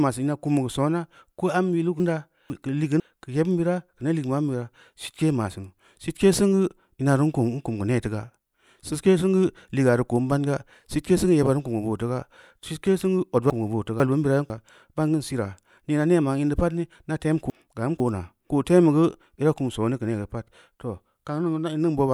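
Speech, and it gets jumbled three times, from 2.0 to 3.0 s, 13.5 to 14.5 s and 17.5 to 18.5 s. Each spot is a case of chunks out of order: a half-second chunk shows up one slot late, so two 500 ms pieces play swapped. Nothing's missing, but the sound briefly runs backwards in sequence, and there are three hard joins each time.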